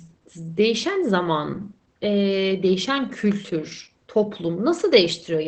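Throughout, the speech sounds muffled and hoarse, with a slightly robotic edge and nothing above 8.6 kHz. This is Opus voice compression in its SILK linear-prediction mode, coding the excitation coarsely and limiting the band to wideband, which fits a bitrate near 12 kbps.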